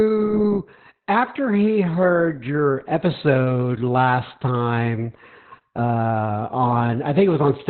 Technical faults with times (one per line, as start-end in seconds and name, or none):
0.00-7.69 Opus voice compression